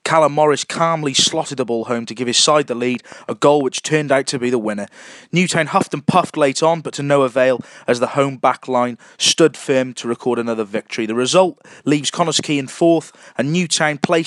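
From 2.95 s to 4.47 s a train of clicks runs through the audio: roughly ten near-identical pulses at a regular rate of about 6 per second, each peaking at around the level of the surrounding sound, so they stand out as a steady ticking. The even spacing and uniform shape point to a repeating external disturbance, likely electrical interference from nearby equipment or a faulty connection or power supply.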